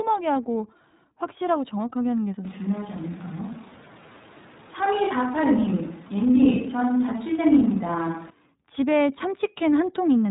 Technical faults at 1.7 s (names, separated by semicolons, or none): iLBC codec